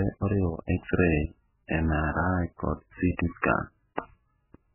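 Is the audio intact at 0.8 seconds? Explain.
No, not really. At 0.8 seconds you're hearing the same heavy MP3 compression that runs through the whole clip. The speech has nothing above about 2.9 kHz, so it's dull and boxy, and it has a watery, swirly texture. That's likely the encoder starving for bits, which fits a very low bitrate around 8 kbps: it lops off the treble at a fixed point and drops weaker frequency detail, which flickers in and out between frames.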